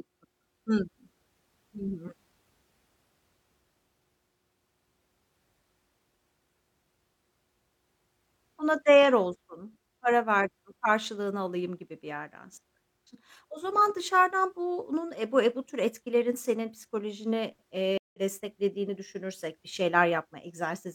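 At 17.98 s, after "tür etkilerin senin psikolojini", the speech drops out for about 0.16 s. This is a stream reconnect. The connection broke and a fresh decoder restarted. Speech resumes at 18.19 s, about 150 ms further on, with "desteklediğini düşünürsek bir".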